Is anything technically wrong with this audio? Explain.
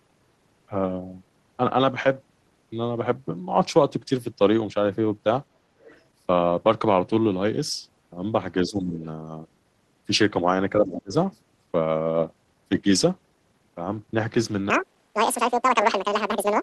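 Yes, there are three kinds of fault in this speech recording.

Other side's voice leaking through, from 5.8 to 6.05 s: a faint second voice, about 30 dB below the talker, slips in briefly, likely residual loudspeaker echo the canceller missed. On a spectrogram it shows as thin, separate harmonic traces beneath the main speech.

Speech suppressed in double talk, from 8.63 to 9.01 s and from 10.77 to 11.13 s: the talker's level sinks for roughly four-tenths of a second each time, by about 15 dB and then about 25 dB. This is likely the echo canceller ducking everything while both sides spoke at once. The waveform envelope shows sudden notches, and the spectrogram thins out across the band.

Section at the wrong speed, from 14.7 s to the end: the audio runs at 2× speed, so it sounds hurried and high, pitched up around ten semitones, likely from playback against the wrong clock. Harmonics on a spectrogram jump upward and spread apart, and syllables compress visibly in the waveform.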